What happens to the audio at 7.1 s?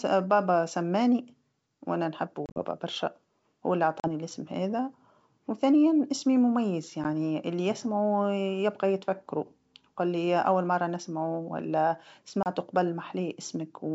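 At 7.04 to 7.06 s, just after "هذا وثانيا إسمي مميز", there is packet loss on the ADPCM call. About a single packet's worth of audio, 10 ms, fails to arrive and is filled with silence. Because the receiver's adaptive predictor and step size no longer match the sender's, the speech comes back from that hard-edged gap with brief, slight distortion before re-converging. The surrounding G.722 wideband coding at 64 kbit/s sounds clear.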